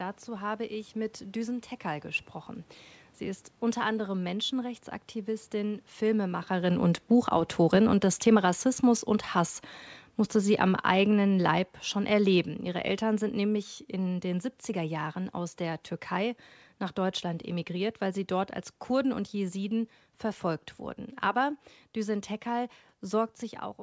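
From 6.04 s to 14.98 s the speech and the room noise behind it sink together by about 11 dB. This is automatic gain falling: the gain control judged the input too loud and steadily lowered its gain.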